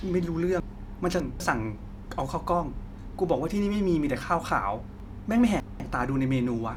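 Speech with chunks out of order twice, at 0.6–1.4 s and 5.0–5.8 s. In each, a 200 ms block plays three blocks late, scrambling the phrase. A spectrogram shows formant tracks breaking at three hard vertical seams; the waveform shows abrupt steps there.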